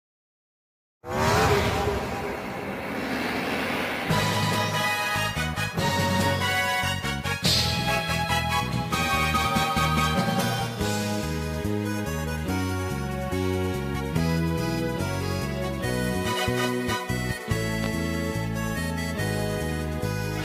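A loud pop sounds from 17.84 to 17.88 s, a single sharp pulse standing roughly 15 dB above the surrounding audio, which continues unbroken beneath it. The cause is likely a sudden voltage step or spike entering the signal chain, such as a connector being disturbed, a switch operating, a static discharge or a driver glitch. The circuitry downstream rounds that jolt into a brief thump lasting only a few hundredths of a second.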